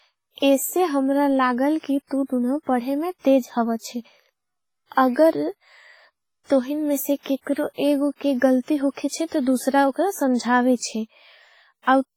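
Throughout, the speech likely went through heavy WMA compression, consistent with roughly 24 kbps, smearing it into ringing, washy sound with hiss that breathes alongside.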